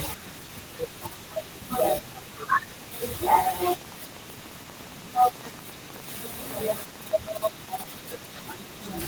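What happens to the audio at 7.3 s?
At 7.3 s the speech sits inside a train of clicks running from 3.55 to 7.95 s: irregularly spaced pulses, about 11.6 per second and some fifty in all, peaking roughly 5 dB above the signal. They tick audibly over the speech and through pauses, most likely from interference or a faulty connection.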